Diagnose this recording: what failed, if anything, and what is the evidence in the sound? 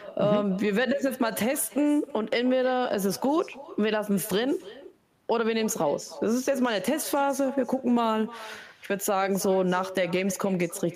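What failed is call processing: there's echo with no canceller running for the whole clip. Every bit of speech gets shadowed by a quieter, thinner copy trailing it by around a third of a second, sitting about 17 dB down. That's the far end playing the call out of a loudspeaker, its mic catching it, and nothing stripping it out, so the talker's own speech makes the network round trip and lands back in the mix.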